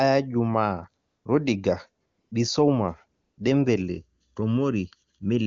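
A speech recording where the real background drops out into a smooth, steady hiss at 1.07 to 1.25 s, 2.05 to 2.31 s and 3.21 to 3.37 s. This is AMR comfort noise: the phone stopped sending speech frames, and the receiver filled each gap with synthetic noise. From 3.81 s to the end the sound turns hollow and phasey, with a first notch around 700 Hz. This is channel delay (comb filtering): one channel lags by under a millisecond before the two are summed to mono. The AMR wideband (HD Voice) coding sounds clean, which fits its highest rate.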